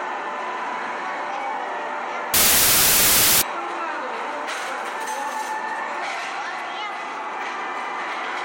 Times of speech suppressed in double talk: none

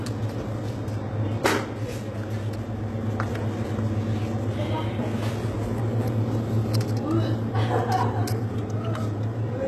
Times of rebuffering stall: none

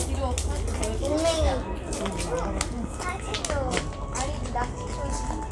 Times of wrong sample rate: 0.00-3.41

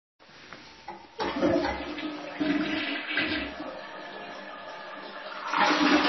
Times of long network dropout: none

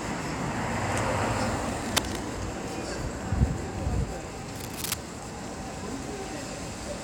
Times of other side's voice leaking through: none

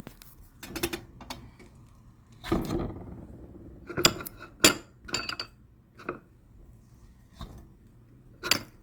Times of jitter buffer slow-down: none

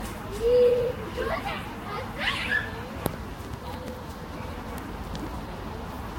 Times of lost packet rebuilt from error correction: none

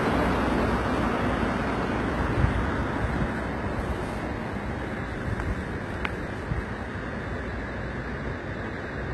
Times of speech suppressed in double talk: none

